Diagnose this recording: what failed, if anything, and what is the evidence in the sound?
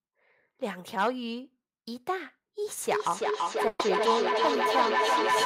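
Feedback howl from an acoustic loop at the call-processing stage, beginning at 2.87 s and running to the end of the clip. A second device in the room feeds the loudspeaker output back into the microphone with net gain, so each pass grows louder and narrows toward the loop's favoured frequency, around 1 kHz, peaking about 2 dB above the speech. The pulsing at roughly a third of a second reflects the loop delay. On a spectrogram this appears as a bright horizontal band near 1 kHz, thickening and beating periodically. The waveform envelope swells rhythmically.

A burst of packet loss on the network, from 3.67 to 3.82 s. About 120 ms of audio never arrived in time, and the receiver's concealment stretched the last received sound over the gap before playback resumed further along, with those 120 ms of content skipped. There is no silent hole. On the waveform the gap shows as a smooth, repetitive, decaying stretch followed by an abrupt jump. 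The spectrogram shows smeared, static content ending in a discontinuity.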